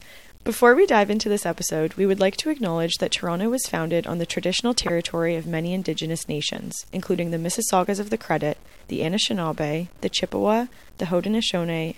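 The clip is speech carrying a grainy, signal-following distortion throughout. Quiet passages turn gritty. This is likely low bit depth without dither, fitting 8-bit truncation, with error roughly 30 dB below the signal. There are three corrupt frame decoded events. The first, at 4.87 to 4.90 s, comes after "founded on the traditional" and before "of many" and is loudest, near -10 dBFS. The second, at 6.55 to 6.58 s before "including the", reaches about -20 dBFS. The third, at 11.24 s, is about -25 dBFS. Each is wrongly placed energy from a damaged compressed frame.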